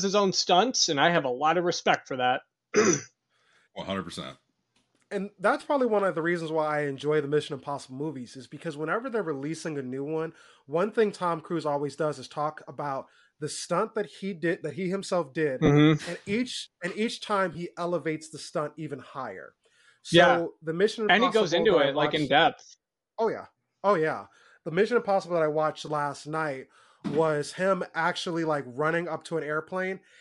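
From start to finish, the speech carries a grainy, breathy edge on its upper frequencies. This is plainly audible codec damage, most likely from Bluetooth LC3 compression. LC3 codes the sound in short transform frames, here fitting 10 ms. At a rate that fits about 48 kbps, it cannot spend bits on every high band. Some upper spectrum is dropped and refilled with noise, which gives the voice its rough sheen.

Lost LE Audio frames then break in five times. The first comes at 5.61 s, a 10 ms gap. Two longer ones follow, from 15.66 to 15.69 s and from 17.53 to 17.55 s, each 20 ms long. Two more 10 ms gaps fall at 22.82 s and 25.87 s. At each, the decoder lacked new data and repeated its last spectrum with scrambled signs. The speech smears into a brief noisy blur. The 20 ms events point to two missing frames.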